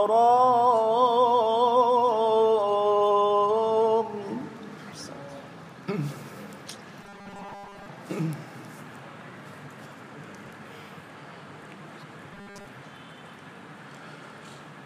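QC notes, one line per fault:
7.03–7.86 s and 12.33–12.67 s, robotic sound from repeated short buffers: the sound turns into a rigid metallic buzz at 200 Hz, still loosely tracking the original shape. The likely cause is audio arriving too seldom, so the same 5 ms slice is replayed over and over, covering most of each span while real audio is skipped. On a spectrogram, steady horizontal harmonics appear at 200 Hz spacing. The waveform shows a short repeating cycle through most of both spans.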